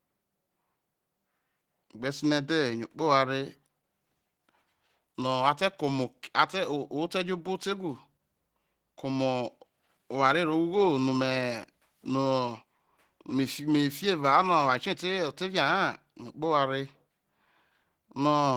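Opus compression runs throughout the speech, which sounds hoarse, rough and grainy. The likely cause is an encoder in its hybrid speech mode at a bitrate that fits roughly 16 kbps, filling starved bands with noise while content still reaches about 20.2 kHz.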